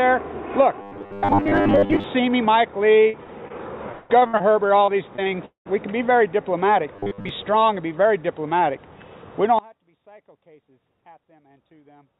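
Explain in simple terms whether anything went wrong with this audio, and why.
Robotic sound from repeated short buffers appears from 0.82 to 2.04 s and again from 6.96 to 7.29 s. A rigid, steady 100 Hz buzz follows the natural sound only roughly. The likely cause is audio arriving too slowly, so the software kept replaying the same 10 ms scrap, skipping most of what was really there.

Repeated packet loss (robotic sound) hits three stretches: 3.04 to 3.52 s, 3.92 to 4.42 s, and 4.86 to 5.67 s. Pieces of the audio never arrived, and each hole, the longest about 0.2 s, was patched by stretching the last sound, giving a choppy result with pieces missing.

One channel inverted is the likely cause of the sound suddenly turning faint from 9.59 s to the end. When one side is flipped upside down and the two sides are combined, the shared sound cancels out, leaving only a weak remainder of the phone-line audio, which carries nothing above 4 kHz.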